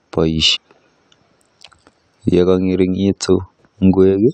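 At 0.55 to 0.57 s the speech is broken by a short burst of damaged data in a compressed stream, lasting about 24 ms. Corrupted bytes in the encoded stream cause the decoder to misread those frames and lose its place until it finds the next valid frame header. The result is a brief chirp, squawk, click or short hole. A simple dropout would leave a gap, and a click would be a single sharp tick.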